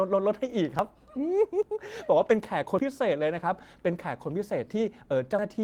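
At 0.79 s and again at 1.63 s the speech jumps ahead, as though about 50 ms had been cut out and the two sides spliced together. There is no silence, just a sudden skip. This is most likely a dropped buffer (overrun): the software failed to collect its samples before the hardware overwrote them. On a waveform each one shows as an abrupt discontinuity in the trace. On a spectrogram it appears as a thin vertical broadband line where the harmonic pattern suddenly shifts.

From 2.17 to 2.35 s the sound turns briefly rough and grainy but never drops out. This is a lost packet rebuilt from error correction, and the extent fits five separate lost packets. The decoder filled about 100 ms with the lower-bitrate backup copies carried in the following packets. On the spectrogram that stretch looks smeared and noisier, with less crisp harmonic detail. The waveform stays continuous, so no gap is visible.

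At 2.79 s the same kind of forward skip of about 50 ms returns, leaving another sharp discontinuity in the waveform and a vertical streak on the spectrogram.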